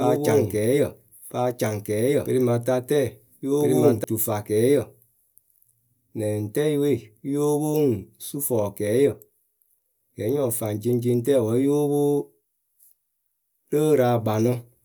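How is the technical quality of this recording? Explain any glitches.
The recording has one clear glitch, in its first four seconds. From the very start until 4.04 s there is a doubled audio track: a second copy of the speech runs about one and a half seconds behind the first, at roughly the same level. This likely comes from the signal being captured twice, once through a slower path. It differs from an echo or reverb because the copy is full-band, doesn't fade or take on any room colour, and cuts off abruptly at 4.04 s.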